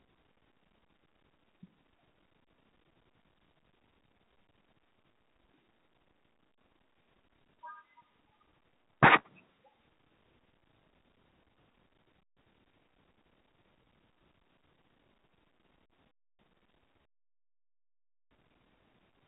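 No technical faults occur in this speech, so there are none to describe in time order.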